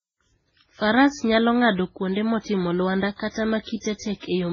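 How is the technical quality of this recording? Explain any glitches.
The quality is poor throughout. Transcoding between lossy codecs is the likely cause: nothing above 7 kHz, with swirly smearing and a second layer of grainy artefacts. Two kinds of damage stacked, rather than one codec's single signature, point to a very low-bitrate MP3-type encode re-encoded as WMA.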